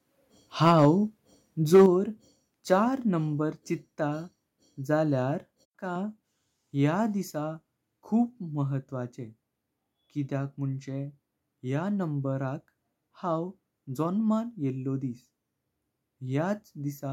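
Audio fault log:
0.66–0.85 s and 1.74–1.86 s, microphone overload: the loudest syllables turn harsh and crackly, slightly at first and much more the second time. The input was likely driven about 2 dB, then about 5 dB, past the converter's limit, flattening a small share of samples, then roughly a fifth.
0.85 s and 1.86 s, microphone volume stepped down: right after each distorted burst, speech and background both drop abruptly in level, about 2 dB and then about 5 dB. This is likely the call software cutting the device's input gain in a single step once it detected clipping.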